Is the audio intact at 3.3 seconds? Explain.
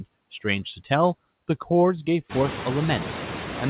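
No. A noise suppressor acts throughout the clip, lowering the room noise by about 11 dB. Near 3.3 s that noise dips between words and swells back under them.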